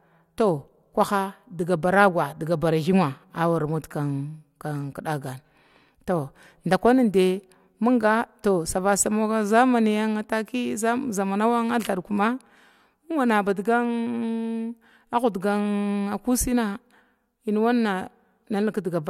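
No technical faults are audible anywhere in the speech recording.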